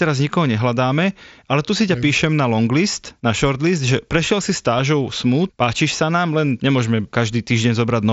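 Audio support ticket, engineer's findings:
Concealed Bluetooth headset packet loss at 4.78 s: a tiny blip, barely audible, roughly 7.5 ms long, which fits a single dropped headset frame. The phone filled the gap by repeating a closely matching slice of the preceding waveform. The mSBC wideband link underneath shows only light graininess.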